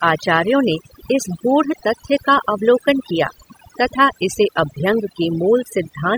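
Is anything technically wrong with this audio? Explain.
Yes, the speech has overdone noise removal running the whole way through. It sounds like the noise reducer was pushed too hard, so any frequency band that sat close to its idea of the noise got pulled way down or shut off, and the softer parts of the voice went along with it. You get a background that drops way down but is full of little twinkly specks.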